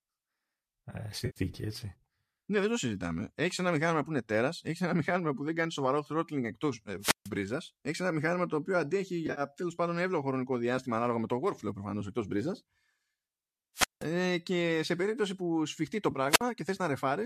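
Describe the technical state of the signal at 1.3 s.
At 1.3 s there is AAC frame loss with concealment, running from 1.26 to 1.39 s. About 100 ms of coded audio never arrived, which fits roughly ten lost frames of the likely low-delay AAC stream. The decoder covers the gap by reusing the last good spectrum with scrambled phase, so the sound turns smeared, noisy and phasey. On a spectrogram, harmonic lines blur into a diffuse, uniform patch. The waveform shows no dropout to silence.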